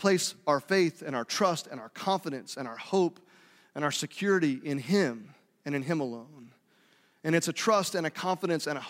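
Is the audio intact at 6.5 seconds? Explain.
Yes, at 6.5 seconds the speech plays through intact with no audible fault.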